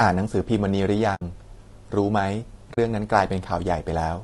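Throughout this speech recording the voice sounds rough and grainy, with noise filling the gaps between pitch harmonics and a thin, somewhat synthetic top band, most likely from low-delay AAC compression (AAC-ELD) at a bitrate that sounds like about 32 kbps. Unlike background hiss, this grain follows the voice and disappears when it stops. There are two short holes from AAC frame loss with muting, at 1.15 to 1.22 s and at 2.73 to 2.78 s, lasting about 60 ms and 40 ms, which fits two or three lost codec frames. The sound fades out and back in rather than cutting off, which sets these apart from hard dropouts or sample-level glitches.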